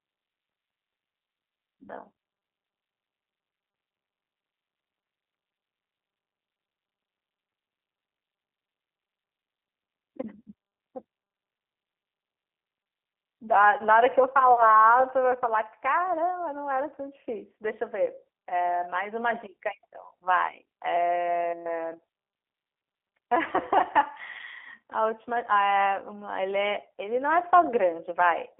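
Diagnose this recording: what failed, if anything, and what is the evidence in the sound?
The failure is at the codec stage, and it lasts the whole clip. The speech carries G.729 codec damage. Nothing passes above about 3.6 kHz. The voice sounds rough and synthetic. That fits an 8 kbit/s coder that rebuilds speech from a filter, pitch predictor and sparse pulses.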